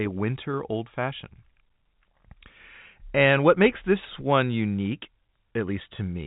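No technical faults turn up anywhere in the speech. The G.711 telephone coding path is audible as a narrow band with nothing above 4 kHz, and at most a faint quantisation hiss rides along with the speech level.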